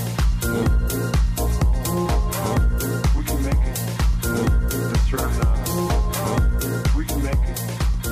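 No technical faults can be heard in this audio.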